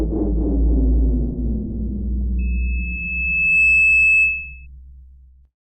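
At 2.38 s a single tone near 2.6 kHz rises out of the sounds, swelling for about a second into a piercing squeal that sits roughly ten decibels above the rest of the audio and holds until it stops at 4.67 s. This is loudspeaker feedback squeal: a microphone was picking up the loudspeaker it was feeding, and at 2.6 kHz the gain around that loop exceeded one, so the tone kept reinforcing itself.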